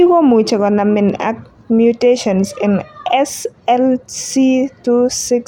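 No technical faults are audible.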